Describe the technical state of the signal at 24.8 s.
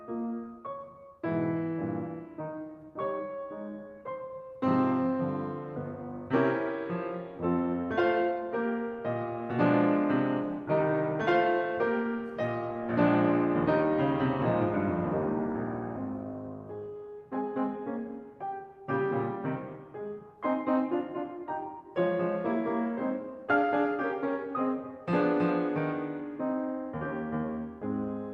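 At 24.8 s the music plays through intact, with no technical fault present at that point.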